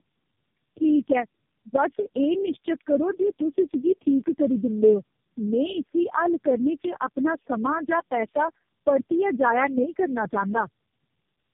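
From start to finish the speech carries tandem speech coding: it sounds as though it passed through about four low-rate speech coders in a row, consistent with G.729A and AMR-NB, each re-coding the last one's damaged output. The result is rough, muffled and warbly. A spectrogram shows nothing above 3.1 kHz, with blurred, patchy formant bands.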